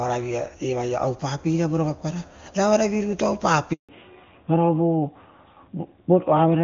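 A handover gap runs from 3.73 to 3.89 s. As the call switched networks, no speech frames arrived for 160 ms, so the voice cuts out within a few tens of milliseconds and stays silent until the new link picks up. Whatever was said in that window is gone.

A fallback to narrowband follows at 3.89 s and lasts to the end. The crisp HD Voice before the break gives way to a narrowband codec with nothing above 4 kHz, so the voice sounds duller and rougher, which fits AMR-NB at 12.2 kbit/s.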